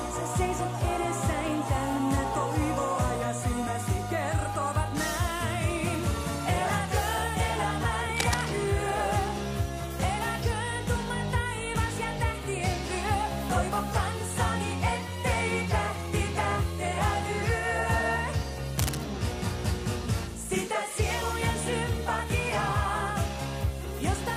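At 8.1 to 8.5 s and again at 18.79 to 19.04 s there's cable scratch noise, rough rustling bursts nearly as loud as the sound, likely a worn connector being jostled.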